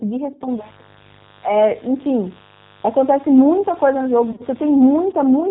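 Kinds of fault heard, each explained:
G.729 codec: speech is rough and synthetic with nothing above 4 kHz, which fits an 8 kbit/s G.729 codec. The grainy texture sets it apart from a simple low-pass filter.
Mains buzz: a raspy 50 Hz buzz sits roughly 25 dB below the speech from 0.48 to 5.12 s. Its sharp upper harmonics distinguish it from a smooth, pure hum.
VoIP packet loss concealed by the speech codec: from 4.32 to 4.44 s, about 60 ms of lost audio, in runs of up to 30 ms, is filled with fading extrapolated sound rather than silent gaps.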